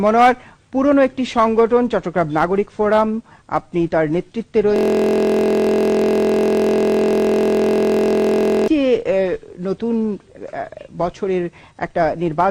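From 4.76 to 8.68 s, a system hang loop repeats one 23.22 ms slice continuously, producing a steady 43.1 Hz buzz, which fits a 1024-sample ring buffer.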